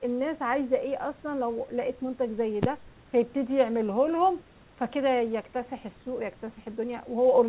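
No technical faults can be heard anywhere in the speech. The call path leaves the sound band-limited, with nothing above about 4 kHz, which gives it the narrow, telephone-like quality of a G.711 mu-law connection.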